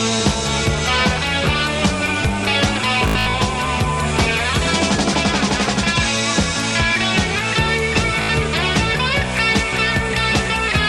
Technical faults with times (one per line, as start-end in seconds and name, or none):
3.08-3.34 Bluetooth stutter
8.22-8.29 Bluetooth stutter